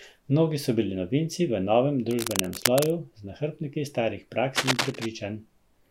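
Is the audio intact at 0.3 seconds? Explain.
Yes, the speech at 0.3 seconds plays through intact, with no dropout, click, distortion or other fault at that moment.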